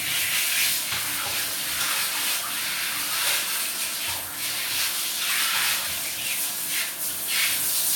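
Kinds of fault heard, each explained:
No technical faults can be heard anywhere in this clip of sounds. There is nothing to explain here, since no kind of fault turns up at any point.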